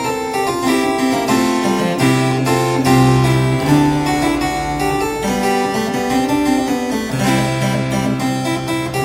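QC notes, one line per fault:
No faults heard.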